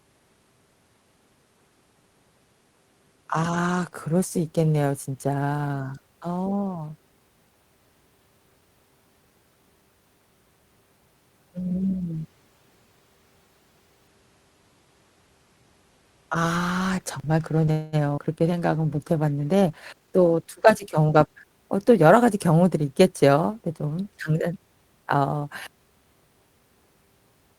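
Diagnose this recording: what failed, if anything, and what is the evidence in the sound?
Network stage: at 17.71 s the sound stretches into a fading buzz for about 0.21 s, then resumes intact, likely a call audio freeze from delayed packets draining the jitter buffer.

Network stage: a brief smear at 18.17 to 18.20 s is short concealed packet loss; about 40 ms was lost and bridged by extrapolating the preceding sound.

Codec stage: from 18.48 to 21.50 s the audio turns rougher and duller, a call bitrate drop from 32 to 17 kbps forcing coarser Opus coding.

Jitter buffer stage: from 19.94 to 21.46 s the audio runs about 11% fast at unchanged pitch, a jitter buffer speed-up trimming roughly a fifth of a second of backlog.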